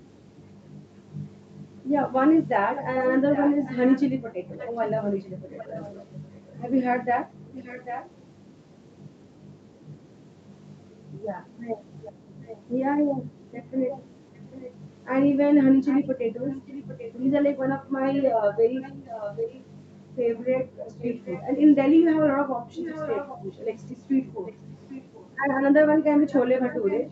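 A delayed copy of the speech returns about 0.79 s behind the original. This is an echo leak, heard seven times: 2.74 to 8.09 s, 12.04 to 12.58 s, 13.51 to 14.71 s, 15.85 to 19.63 s, 20.99 to 21.42 s, 22.77 to 25.31 s, and 26.27 s to the end. It stays well below the main speech. It is faintest at 12.0 s and strongest from 15.85 to 19.63 s and 22.77 to 25.31 s. The likely cause is a far-end loudspeaker whose echo canceller let part of its microphone pickup back into the call.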